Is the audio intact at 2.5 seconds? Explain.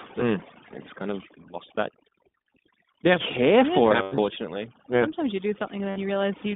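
No. At 2.5 seconds the speech carries two faults that run through the whole clip. The first is overdone noise removal. The reduction is set so hard that individual frequency bands near the estimated noise floor are pulled almost to nothing, and the softer parts of the voice go with them. The background becomes near silence dotted with twinkling specks. That spectral flicker sets it apart from a simple low-level gate, which would switch the whole signal on and off rather than pitting single bands.

The second is the iLBC codec, at plainly audible strength. Everything sits inside a line band of about 200 Hz to 3.6 kHz, so the top end is gone. The speech has a slightly rough, synthetic edge, and each frame's excitation is coded on its own, which fits 20 ms frames at the 15.2 kbps mode. Unlike plain low-pass filtering, the loss includes that buzzy, artificial texture, not only missing treble.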